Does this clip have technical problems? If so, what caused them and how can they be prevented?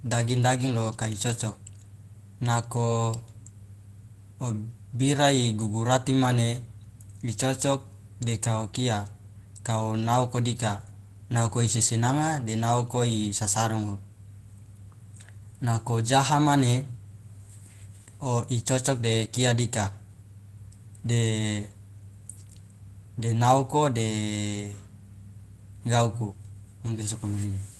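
No, this speech clip has no technical problems. It has passed through a call path using the Opus codec, and the high frequencies stop at about 12 kHz, which fits a setting near 24 kbps.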